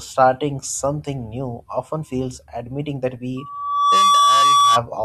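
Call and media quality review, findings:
Loudspeaker feedback squeal, 3.37 to 4.83 s, right after "often feels admitting that". Single 1.2 kHz tone swelling over under a second to roughly 10 dB above the speech. Probable component: open mic picking up its own loudspeaker, loop gain above unity at 1.2 kHz, self-reinforcing.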